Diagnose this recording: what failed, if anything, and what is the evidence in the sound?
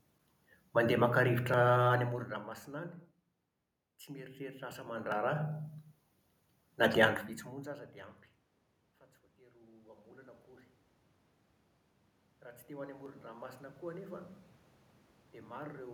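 A level control in the call processing or playback gain stage stepped the volume in 1 dB jumps, roughly 30 per second, with no smoothing. This zipper noise ticks over the speech as the level falls about 15 dB from 1.88 to 2.60 s and climbs back about 15 dB from 4.72 to 5.76 s.

The automatic gain rising comes from the call processing's gain control. After the input dropped about 21 dB, it raised gain by about 6 dB between 9.37 and 10.49 s, then by about 5 dB from 12.42 to 14.35 s. Each time, the speech and the room background swell up together.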